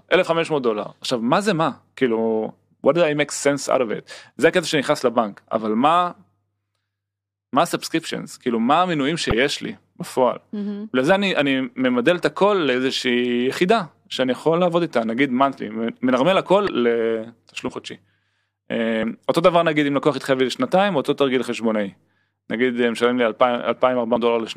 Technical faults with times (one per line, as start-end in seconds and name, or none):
3.74 compressed frames skipped
9.30-9.33 corrupt frame decoded
16.65-16.69 compressed frames skipped
17.67-17.69 compressed frames skipped
19.02 compressed frames skipped
24.15 compressed frames skipped